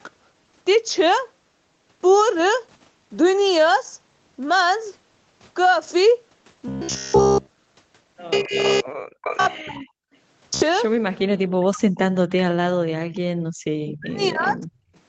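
Things start going wrong around 8.39 s. From there to 8.59 s the speech dips by roughly 20 dB for about a fifth of a second, which sounds like speech suppressed in double talk: the echo canceller most likely couldn't tell the near talker from the loudspeaker signal while both sides were active, so it pulled the whole microphone down.

Right after, from 8.67 to 8.86 s, a faint delayed copy of the speech shows up about 245 ms behind the original, sitting roughly 20 dB under it. That's an echo leak, likely from a loudspeaker on the far end whose canceller let part of its microphone pickup slip through and get sent back.

From 9.0 to 9.22 s the room sound itself drops out hard, by about 35 dB, then returns. That's background gated by the echo canceller, which clamped the microphone while the loudspeaker was playing and released it afterwards.

The echo leak comes back straight away, from 9.22 to 9.37 s, with the same 245 ms lag but much louder this time, roughly 10 dB below the speech.

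After that the double-talk suppression gets heavier. The speech sinks by around 40 dB at 9.53 to 10.04 s, 11.47 to 12.14 s, 12.65 to 13.32 s and 13.86 to 14.74 s. All of this sits on top of the call path's band limit, with nothing above 8 kHz.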